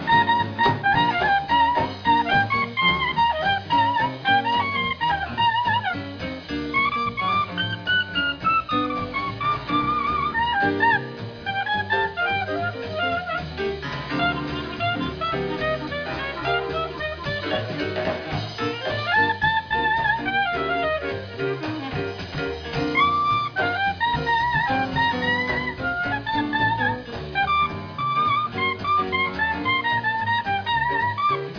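No dropouts, glitches or other technical faults turn up anywhere in this recording, so there's nothing to flag here.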